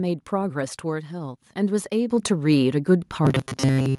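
At 2.1 s the microphone volume steps up by about 8 dB, and again at 3.12 s by about 5 dB, voice and background jumping together as input gain is raised. From 3.25 s to the end the speech turns into a rigid metallic buzz at 133 Hz, robotic sound likely from repeating a roughly 7.5 ms buffer over most of the audio.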